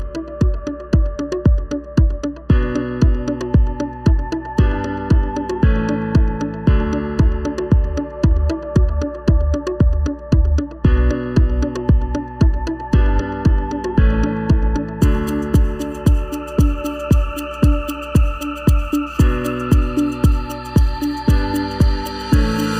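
From start to finish there's channel delay (comb filtering): one side sits a bit under a millisecond behind the other, and once they're folded to mono the shared content cancels at evenly spaced frequencies, first notch around 700 Hz, so everything sounds hollow and phasey.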